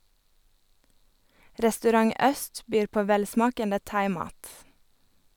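No audible technical faults.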